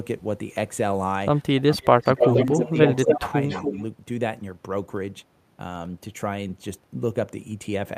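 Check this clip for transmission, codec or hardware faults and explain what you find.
Two faults are audible in the speech, both clustered between about 1.6 and 3.8 s: speech suppressed in double talk, and echo leak.

Speech suppressed in double talk: From 1.61 to 3.35 s the voice repeatedly dips and fades, at worst by about 20 dB, adding up to roughly a second of lost level. A shorter dip of about 10 dB follows at 3.65 to 3.76 s. The likely cause is an echo canceller that, with both sides talking, couldn't tell the near talker from loudspeaker echo and attenuated everything.

Echo leak: A delayed copy of the voice trails it by about 0.28 s in four bursts, at 1.82 to 2.44 s, 2.65 to 2.87 s, 3.03 to 3.15 s and 3.49 to 3.82 s. The first and third bursts are roughly as loud as the voice itself. The other two sit about 15 dB and 10 dB lower. This is likely a far-end speakerphone whose echo canceller let part of its microphone pickup return down the line.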